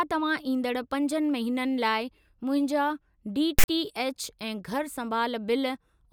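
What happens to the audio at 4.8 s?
Nothing goes wrong at 4.8 s; the speech there plays through intact, with no dropout, click or distortion.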